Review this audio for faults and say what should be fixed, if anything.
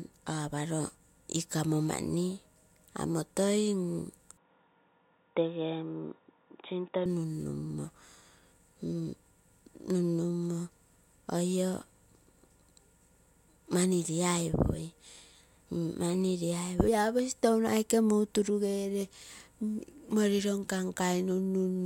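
From 4.37 to 7.06 s the speech suddenly goes dull and boxy, with nothing above 3.8 kHz. There's no gap at the switch, the level barely moves, and the faint new noise floor sits well below the signal. That's likely an input switched to a poorer device, then back. Pinning the recording input to one microphone and keeping the system from auto-switching devices mid-session should stop it.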